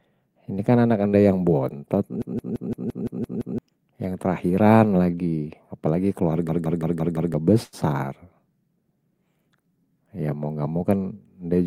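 Right at 1.09 to 1.15 s, just before "yang bontot", there's a short concealed packet loss. About 40 ms of the speech never made it to the decoder in time, so the receiver papered over the hole by extending what it had last heard, then cross-faded back into the real signal. You get a quick smear or wobble there.

Then from 2.22 to 3.58 s, straight after "yang bontot", comes a system hang loop. The machine or driver stalled while the audio hardware kept cycling the same chunk of its ring buffer, so one 170.67 ms slice repeats eight times at about 5.86 Hz. That chunk length fits an 8192-sample buffer. Roughly a second and a half of real audio is lost behind it. The same hang loop returns at 6.49 to 7.34 s, the identical 170.67 ms slice repeating five times, swallowing around a second of material.

Finally, at 7.63 to 7.75 s there's a burst of packet loss, about 100 ms missing with 94 ms of it filled in. 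The concealment keeps the last sound going and fades it as the gap stretches on, so you hear a held, dying buzz or hiss. Then the speech picks up further along with that stretch cut out.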